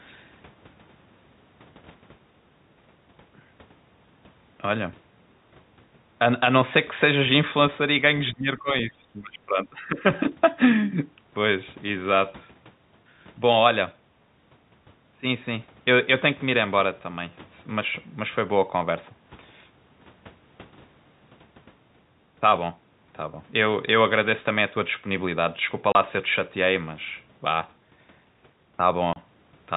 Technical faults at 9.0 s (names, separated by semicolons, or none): speech suppressed in double talk